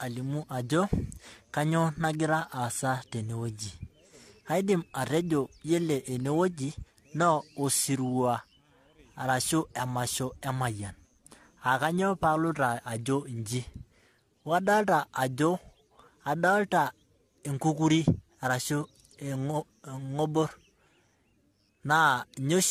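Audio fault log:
throughout — generation loss. The speech sounds swirly, smeared and hollow, and consonant attacks blur. Nothing remains above 14.1 kHz. The likely cause is about four rounds of lossy re-encoding, each quantising on a shifted frame grid. The ceiling fits AAC-LC near 64 kbit/s.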